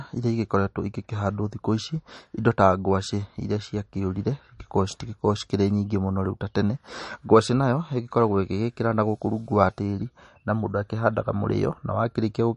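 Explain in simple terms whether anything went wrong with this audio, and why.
Yes. The speech sounds watery and swirly from start to finish, with nothing above 10.6 kHz, likely from heavy MP3 compression trimming treble and discarding quiet detail.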